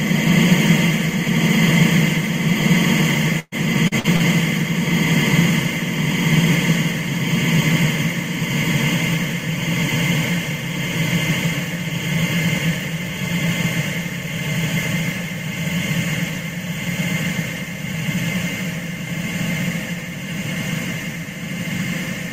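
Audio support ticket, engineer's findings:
Repeated packet loss (robotic sound), 3.39–4.23 s: four dropouts, longest 124 ms, about 29% of the stretch patched. Jitter buffer concealment repeats the last audio, hence the choppy sound with pieces missing.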